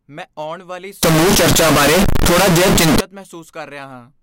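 From 1.03 to 3.0 s, just after "ਮੈਂ ਆਉਣ ਵਾਲੀ", floating-point samples were likely read as integers, which fits 32-bit float data decoded as 32-bit integer. This float read as integer fault squares the waveform at an almost fixed, high level: very loud and harsh, noise as loud as speech, pitch still traceable.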